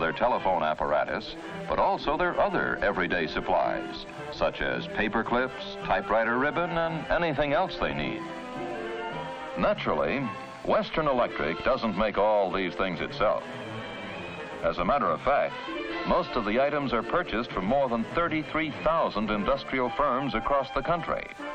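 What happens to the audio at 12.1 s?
Imaging from linear upsampling is present at 12.1 s, as it is for the whole clip. The audio was converted from 24 kHz to 48 kHz by joining neighbouring samples with straight lines, which barely filters anything. The top of the original band sounds dulled, and a mirrored copy of the spectrum remains between 12 and 24 kHz, about 40 dB below the signal. It is heard as a faint metallic shimmer on bright, sibilant content.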